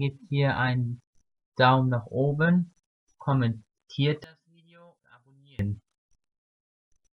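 From 4.24 to 5.59 s, the sound nearly vanishes, dropping by about 32 dB. Only a faint residue remains. The likely cause is one channel inverted. With one stereo side's polarity reversed, the shared content cancels when both are summed to mono.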